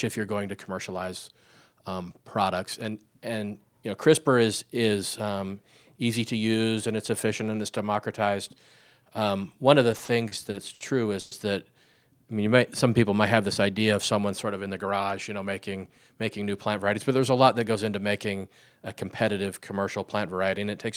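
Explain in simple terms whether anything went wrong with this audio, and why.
Late-arriving data on the call caused four separate problems in the speech.

Between 9.91 and 10.82 s there are repeated stalls (stutter). Pieces of the call kept arriving late, so the receiver's small holding store, the jitter buffer, ran dry six times. Each time it stretched out the last bit of sound to cover the wait, about 170 ms in all, the longest single wait 60 ms. Nothing is lost, but the speech drags and hiccups through that second.

From 11.20 to 11.33 s comes a call audio freeze. The likely cause is a batch of data held up on the network, leaving the jitter buffer empty for a moment. The receiver covered about 110 ms by carrying the last sound on as a brief fading buzz or hiss, then resumed exactly where it stopped. The result is a short frozen gap pushed into the speech, with nothing actually missing.

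From 12.34 to 12.58 s there is a jitter buffer slow-down. The receiver's reserve was running low, or it had just raised its target delay, so to build up a reserve the receiver repeated tiny slices of the sound many times in a row, adding about 36 ms. Speech plays at roughly 88% of normal speed while keeping the same pitch, so sounds there come out slightly drawn out.

From 14.68 to 15.45 s there is a jitter buffer speed-up. Too much audio had piled up in the receiver's store, so it trimmed many tiny slices to catch up, removing around 70 ms in total. The speech runs about 8% faster at the same pitch, giving that stretch a slightly hurried feel.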